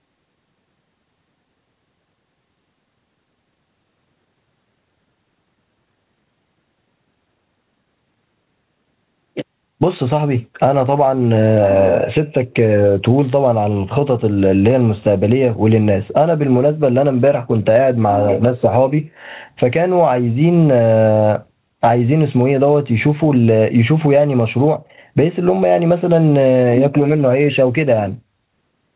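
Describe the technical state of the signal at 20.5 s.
At 20.5 s the level pumps, a breathing swing of around 15 dB that leaves loud and quiet passages squashed close together. This gain pumping runs through the whole clip, not just this moment. It is likely caused by input gain set far too high, with a fast limiter or compressor clamping down on every peak and releasing in the gaps. The band stops at 4 kHz, as expected for the G.711 call path.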